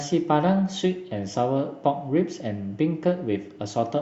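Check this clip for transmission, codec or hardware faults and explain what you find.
Nothing in the speech points to a fault of any kind. There is no moment in the recording that calls for an explanation.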